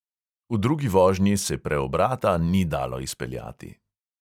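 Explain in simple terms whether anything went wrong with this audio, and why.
Nothing went wrong with this audio; listening through the recording reveals no fault to explain.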